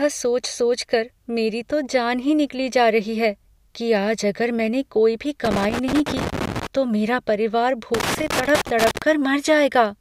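Irregular bursts of crackle and scratching break into the speech from 5.45 to 6.67 s and again from 7.94 to 9.02 s. This is loose connector crackle: a worn or dirty contact keeps making and breaking as it shifts, chopping the signal into rough fragments.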